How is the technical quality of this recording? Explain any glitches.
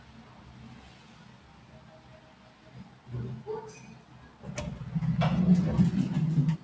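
The quality is held back by one fault, present throughout. Nothing comes through above 8 kHz, which fits a wideband call codec such as G.722.

Noise suppressor applied to sounds: for the whole clip, a speech-tuned suppressor treats steady sound and decaying tails as noise. Onsets pass, then sustained parts drop by roughly 10 dB. The level pumps and flutters, and the sound thins out.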